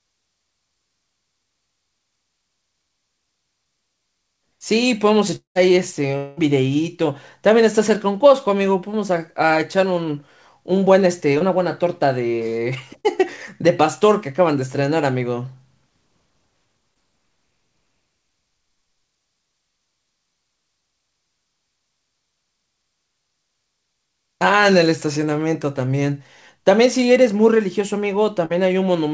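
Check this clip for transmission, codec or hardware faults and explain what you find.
Two kinds of fault are present, both from packet delivery; the band stops at 8 kHz, which fits a G.722 call codec.

Long network dropout, 5.36–5.57 s and 6.17–6.39 s: about 0.2 s of audio is lost each time, likely from network interruption. The receiver stretches the last sound into a fading buzz. The first gap ends in near silence; the second stays filled throughout.

Short concealed packet loss, at 11.39–11.42 s, 13.00–13.06 s, 16.94–16.97 s and 28.45–28.52 s: 20–40 ms holes are patched by extrapolation, heard as brief smears or wobbles.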